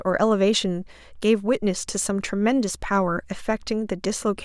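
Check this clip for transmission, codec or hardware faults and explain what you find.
No faults can be heard.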